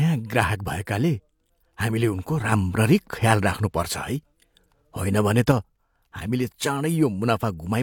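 Right after "हामीले उनको", at 2.52 s, there's a sudden gain jump: the speech and the background noise both step up by about 5 dB together and stay there until 5.52 s. That's likely a gain setting applied instantly, with no ramp.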